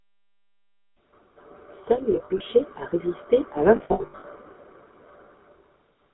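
A buzzy, gravelly roughness runs through the whole of this speech recording, and the sound sits in a narrow band of about 250 Hz to 3.6 kHz, with no air or sparkle above. That is the GSM full-rate codec at 13 kbps. It rebuilds the voice from a vocal-tract model driven by a sparse pulse train, and that coarse excitation is what makes the timbre grate. The damage is plainly audible for the full length. Twice the voice catches on a harsh, metallic ring, first from 2.12 to 2.41 s and again, longer, from 3.76 to 4.25 s. These are lost GSM frames. The decoder held the last good frame's settings and replayed them. About 140 ms of sound is missing in the first stretch, scattered over 280 ms. In the second, about 340 ms is missing over 480 ms. No single gap runs much beyond about 70 ms, so the ring stutters rather than fading to silence. The low-bass roll-off comes from the call's normal microphone processing.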